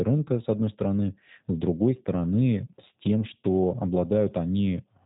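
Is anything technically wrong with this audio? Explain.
Yes. Throughout the speech runs through a G.729 codec. It resynthesises each 10 ms frame from a vocal tract filter, a pitch predictor and a few pulses, giving a plainly rough, synthetic texture that fits an 8 kbit/s link. Nothing above 3.8 kHz remains, so sibilants sound dull.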